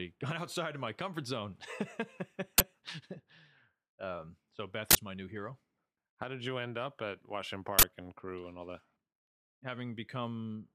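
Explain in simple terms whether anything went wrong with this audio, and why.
Three sudden, very loud bursts of harsh digital noise cut through the speech, at 2.58 to 2.60 s, 4.91 to 4.95 s and 7.79 to 7.83 s. This is an uninitialised buffer fault. The playback system sent a chunk of memory to the speakers before any audio had been written into it, so leftover junk data was played as sound. The lengths, about 21 ms and twice about 43 ms, fit chunks of 1024 and 2048 samples.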